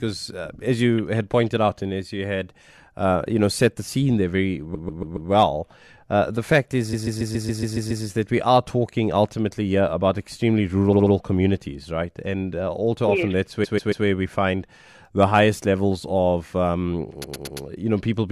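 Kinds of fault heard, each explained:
Repeated frames: at 4.74, 6.92, 10.92, 13.63 and 17.23 s, a block of compressed speech 70 to 140 ms long is decoded over again three to eight extra times, so the speech stutters in place and each stretch runs up to 1.1 s longer.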